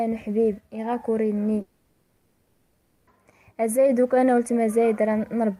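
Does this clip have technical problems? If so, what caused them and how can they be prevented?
Yes. Long network dropout, 1.61 to 3.09 s: audio likely stopped arriving, so the receiver filled the 1.46 s gap with a fading buzz or hiss, and that portion is lost. A steadier, less congested connection, or recording locally and uploading the file afterwards, would prevent it.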